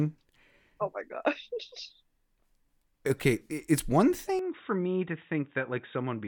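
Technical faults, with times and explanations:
4.39 to 6.28 s, input switched to a poorer device: The speech abruptly turns dull and boxy, with nothing above 3.8 kHz. It drops about 5 dB and gains a faint new background noise. There is no gap at the change. The likely cause is a switch to a narrower-band microphone.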